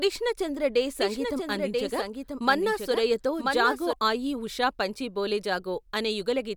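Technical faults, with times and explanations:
0.99 to 3.93 s, doubled audio track: just after "చంద్ర డే", a second full-band copy of the speech appears about a second behind the original and somewhat quieter, with no reverberant tail or room colour, and it cuts in and out abruptly, ending before "ఆయీ ఉషా పంచీ బోలే". The likely cause is the same signal reaching the mix twice, once through a slower capture path or an edit that left two misaligned copies overlapping.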